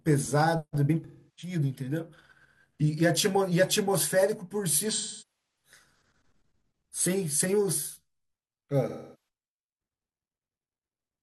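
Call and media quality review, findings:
Smeared, noisy patches in the speech at 1.04–1.52 s, 4.89–5.71 s and 8.88–9.16 s. AAC frame loss with concealment: the decoder rebuilt missing frames from the last good spectrum, with gap lengths that fit roughly 8, 14 and 11 lost frames.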